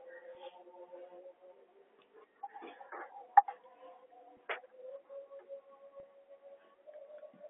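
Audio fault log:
0.35 s, 4.37 s and 6.00–6.03 s: packet loss with pitch repetition. Short gaps of about 10, 10 and 30 ms were bridged by repeating the last pitch period, so the speech briefly holds on a slightly buzzy, frozen tone.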